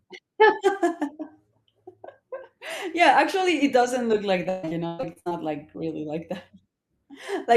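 In this speech clip, the sound turns choppy and robotic from 4.43 to 5.33 s, with pieces missing and a stuttering quality. This is repeated packet loss. Audio arrived late or not at all again and again, and each gap, the longest about 139 ms, was patched by stretching the preceding sound, so roughly half of that stretch is concealment rather than real audio.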